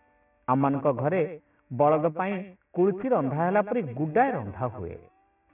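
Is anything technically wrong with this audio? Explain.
Yes. Aliasing runs through the whole clip. The rate was cut, which fits a drop to 6 kHz, without filtering first. Content above 3 kHz folds back as unrelated, gritty tones roughly 25 dB below the signal. On a spectrogram, mirrored energy fills the band right up to the 3 kHz edge.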